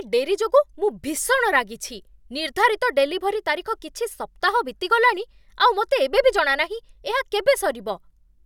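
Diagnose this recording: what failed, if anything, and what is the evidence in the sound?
Nothing in the speech signal points to a failure at any stage of the recording or playback chain; the signal stays continuous and intact throughout.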